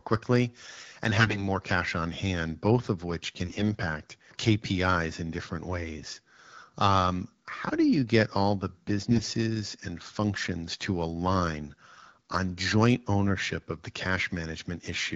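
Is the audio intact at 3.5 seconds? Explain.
No. From 3.45 to 3.66 s, just after "hand both of which", AMR bit errors strike: on a weak link, unprotected bits in roughly ten frames flipped while the checksum passed, misplacing excitation pulses and skewing pitch, gain and spectrum values. Pitch and level hold, but the sound turns hoarse, scratchy and gargly.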